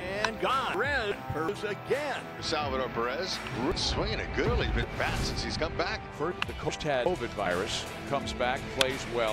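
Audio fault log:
0.74–1.49 s, 3.72–4.83 s and 6.32–7.06 s, chunks out of order: in each span a block of about 0.37 s plays too late, after the audio that should follow it. It is one block late in the first and third spans and two blocks late in the middle one. No audio is lost, but the sequence is jumbled, with three hard splices at the block edges.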